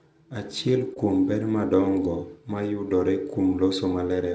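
At 0.94 s there's a short concealed packet loss. A 20 ms slice of the speech didn't reach the decoder in time, so the receiver carried the preceding sound across the gap and blended back into real audio by 0.98 s. You hear it as a quick smear or wobble.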